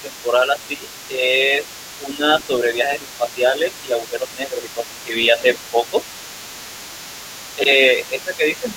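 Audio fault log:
throughout: other side's voice leaking through. A second voice sits under the talker for the whole clip, roughly 20 dB below the main speech. It is likely residual loudspeaker echo that the echo canceller failed to remove from the microphone. Unlike room reverberation, it is a separate voice saying different things, and unlike line crosstalk, it is sound replayed through a speaker and picked up again.
0.01–1.64 s, 1.97–5.97 s, 7.56 s to the end: speech suppressed in double talk. In each stretch the talker's voice sinks by up to about 10 dB, in patches totalling about a second, then about three seconds, then about half a second. The cause is likely an echo canceller that, with both sides talking, could not tell near speech from echo and turned both down. Packet loss or a gain fault would not track the other voice like this.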